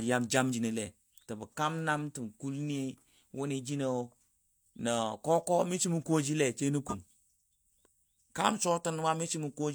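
Speech, with three compressed-stream defects. At 0.49 to 0.54 s, compressed frames are skipped: about 40 ms of audio is missing and the speech jumps forward. The jump comes from whole codec frames lost from the file or rejected by the decoder as damaged. Corrupt frames are decoded at 2.98 s and again at 6.85 to 6.95 s. In each case the decoder played a frame with flipped bits, and misread gains or codes put energy in the wrong frequencies. That energy is heard as a brief chirp or noise burst lasting about a couple of frames. The event at 2.98 s is very faint, well down in level. The one near 6.9 s is much louder.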